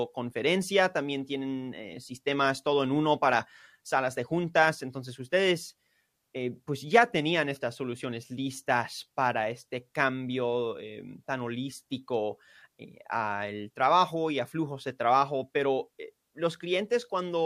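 Nothing goes wrong anywhere in this recording of speech; there's simply no fault to point to along the way.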